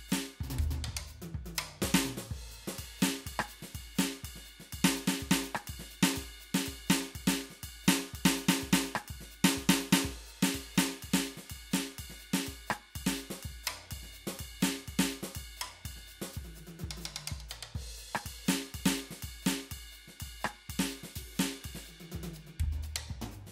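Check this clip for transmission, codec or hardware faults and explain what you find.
Nothing to flag here: the music comes through without any transmission, codec or hardware trouble that I can hear.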